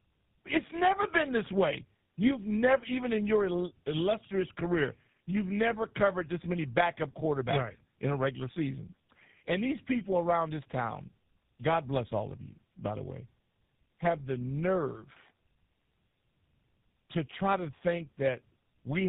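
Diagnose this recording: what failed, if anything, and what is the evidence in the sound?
Tandem speech coding at the codec stage: across the whole clip the speech is rough, muffled and warbly, with nothing above 3.8 kHz. The artefacts point to two low-rate speech codecs in series, likely G.729A then GSM full rate, the second recoding the first's degraded output.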